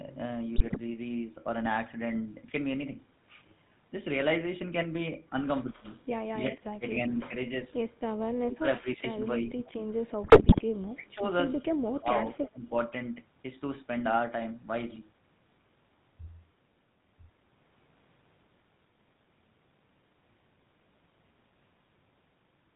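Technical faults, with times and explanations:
Throughout, GSM full-rate codec: The speech was coded with the original GSM full-rate scheme at 13 kbps. It models the vocal tract as a filter and excites it with a sparse, regular pulse train, discarding two of every three excitation samples, and it carries nothing above 4 kHz. The damage is plainly audible. The voice has a buzzy, gravelly edge and a muffled top end, because fine detail in the excitation and all high-frequency content are gone.
0.56 to 0.78 s and 10.24 to 10.63 s, GSM bit errors: In both stretches corrupted bits reached the speech decoder, with an error rate around 5 percent. When filter coefficients, pitch lag or gain values decode wrongly, each affected frame gets a distorted spectral shape or a sudden level jump. The voice breaks into squawks, pops and gargling for about a quarter second early on and for nearly 0.4 s in the later burst.
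5.63 to 5.89 s, 6.40 to 6.84 s, 7.28 to 7.65 s, 9.42 to 9.77 s and 10.95 to 11.23 s, speech suppressed in double talk: The level repeatedly dips or drops out in pieces. This is likely an echo canceller that could not separate the near talker from loudspeaker echo while both sides spoke, so it attenuated everything. The first dip is the deepest, about 35 dB, enough to nearly erase the sound. The later ones are shallower, roughly 10 to 20 dB.
12.38 to 12.67 s, echo leak: A faint delayed copy of the voice follows the original by 313 ms, at about 15 dB below the direct speech. This is likely a loudspeaker on one side whose echo canceller failed to remove all of what its microphone picked up, so a residue was sent back. It sounds like a brief ghost trailing the talker.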